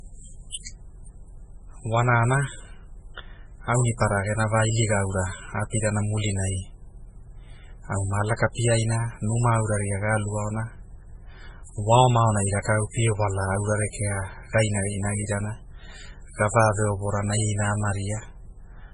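Speech throughout sounds watery and swirly, with heavy smearing and nothing above 10.5 kHz, likely MP3 compression at a bitrate as low as 16 kbps starving the encoder of bits. From 8.37 to 8.39 s, a short hiss precedes a sharp attack and softens it, a pre-echo where quantisation noise spreads about 23 ms ahead of the onset within one transform block.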